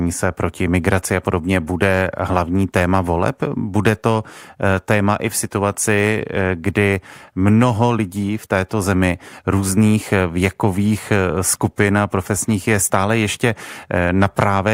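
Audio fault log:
No faults are heard anywhere in this speech recording. There is nothing in it to log.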